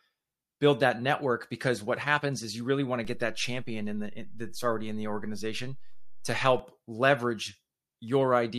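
At 3.05 s, just after "you really want to", a DC step shifts the waveform's zero line by about -34 dBFS. A low thump marks it, and the offset holds until 6.59 s.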